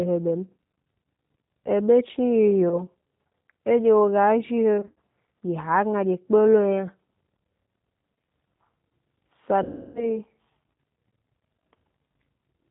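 Throughout, the speech carries plainly audible G.729 codec damage, consistent with 8 kbit/s G.729A. Rebuilding each frame from a vocal-tract filter and a few pulses leaves the sound rough and slightly synthetic, and a spectrogram shows nothing above 4 kHz.

VoIP packet loss concealed by the speech codec follows three times: about 20 ms missing at 2.69–2.83 s, about 100 ms scattered over 160 ms at 4.81–4.97 s, and 320 ms at 9.63–10.18 s. In each, the decoder extends its last pitch and filter into a buzzy tone or coloured noise that fades, seen as a shrinking waveform envelope.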